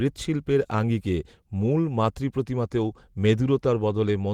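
No technical faults are audible.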